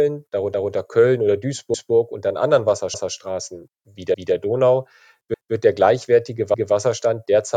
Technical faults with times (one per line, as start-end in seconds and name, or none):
0.54-0.74 overlapping chunks
1.74-1.94 overlapping chunks
2.94-3.14 overlapping chunks
4.14-4.34 overlapping chunks
5.34-5.54 overlapping chunks
6.54-6.74 overlapping chunks